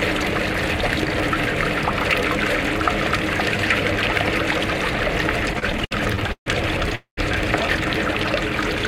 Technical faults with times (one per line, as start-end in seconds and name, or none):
5.53-6.48 repeated stalls (stutter)
6.95-7.19 call audio freeze